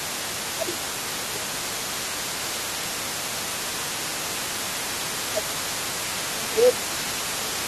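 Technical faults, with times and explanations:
Throughout, other side's voice leaking through. A second voice sits under the main speech for the whole clip. It is only about 5 dB quieter than the talker, so it is easy to hear and competes with the speech. The likely cause is a far-end voice played on a loudspeaker that reaches the microphone again. The echo canceller fails to remove it, and the remainder is sent back out with the talker.
0.06–0.18 s, 0.56–2.15 s, 3.61–4.77 s, 5.33–5.7 s and 6.34 s to the end, speech suppressed in double talk. In each stretch the talker's level sinks while the other voice is also present. The dips go down by about 5 dB, and by about 10 dB in the second and last stretches. The likely cause is the echo canceller failing to separate its own talker from the loudspeaker echo. It turns both down together.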